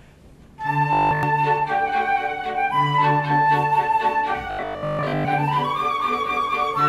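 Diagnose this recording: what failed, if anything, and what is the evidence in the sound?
Two stretches turn into a rigid, metallic buzz pitched at 50 Hz: 0.93 to 1.23 s, where the sound is repeated practically throughout, and 4.51 to 5.27 s, where most of it is. This is robotic sound from repeated short buffers, likely a driver or buffer-stage starvation. Fresh audio arrived too late, so the same 20 ms block was replayed in place of the skipped material. Its period sets the fixed 50 Hz drone.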